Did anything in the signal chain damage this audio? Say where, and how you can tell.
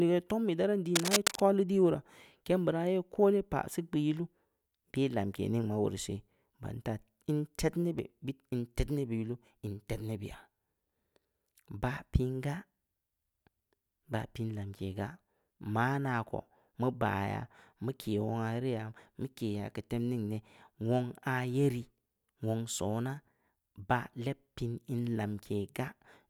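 Yes. In the analogue wiring, a worn cable or connector likely shifted, its contact resistance jumping about. From 0.95 to 1.40 s, just after "tom ii da raan", this cable scratch noise rustles roughly as loud as the speech.

At the buffer stage, chunked recording likely dropped a sliver while switching blocks, leaving audio missing between chunks. At 7.99 s about 20 ms vanishes, and the two sides butt together as a skip.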